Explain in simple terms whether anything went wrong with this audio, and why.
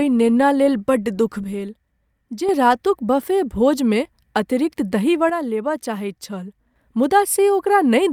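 Something likely went wrong with the stereo signal: one channel drops out twice, from 1.44 to 2.49 s, just after "बड्ड दुख", and from 5.30 to 6.76 s. Each time, the speech suddenly gets noticeably quieter, then jumps back to full level when the channel returns.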